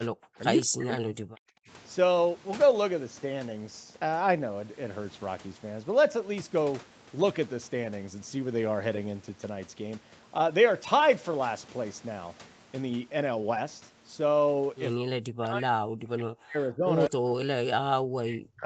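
A speech recording in which the voice repeatedly sinks or breaks into fragments: briefly at 0.03 to 0.15 s, then from 0.66 to 1.69 s, 15.04 to 16.87 s and 17.09 s to the end, dipping by about 40 dB at worst. This is likely speech suppressed in double talk, with the echo canceller turning the talker down while far-end audio plays. Unlike packet loss, the gaps are gated, uneven fades rather than clicks or smeared concealment.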